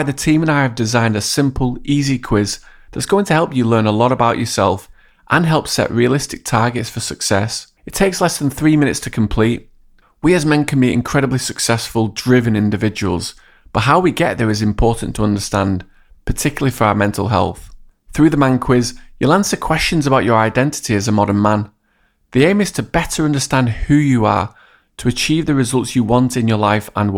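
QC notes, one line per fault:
No faults heard.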